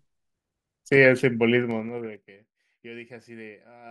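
From 1.58 s to 2.28 s the speech carries zipper noise. The level is pulled down by roughly 25 dB, but instead of gliding it drops in unsmoothed 3 dB steps, about ten per second. Each step is an instantaneous gain jump that puts a small discontinuity in the waveform, so a rapid ticking rides on the sound for the duration of the fade.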